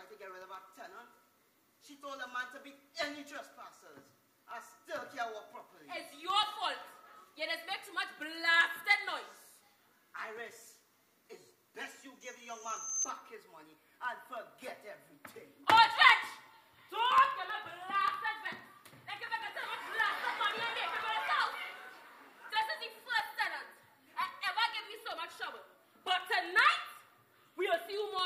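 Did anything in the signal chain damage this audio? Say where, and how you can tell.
Yes, periodic USB or driver dropouts at the driver stage: tiny silent gaps every 64 ms from 0.10 to 28.19 s tick only under signal, and their fixed spacing rules out random clicks.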